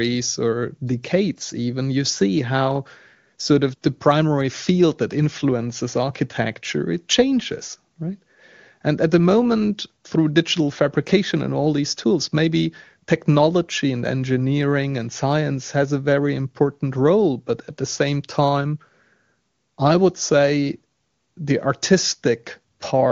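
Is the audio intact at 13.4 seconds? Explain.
Yes, the speech at 13.4 seconds is intact, with no fault at that moment.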